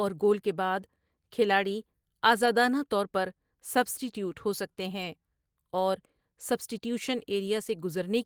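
Packets went missing twice in this speech, and each time the decoder rebuilt the audio from the low-bitrate copy carried in the following packet, so this is a lost packet rebuilt from error correction rather than a dropout. At 2.45 s, just before "طور پر سبٹی ٹیوٹ", a brief 20 ms patch turns rough and noisy. From 4.97 to 5.03 s, after "سبٹی ٹیوٹ ہو سکتے", a longer 40 ms stretch of that grainier, noisier sound points to two separate lost packets.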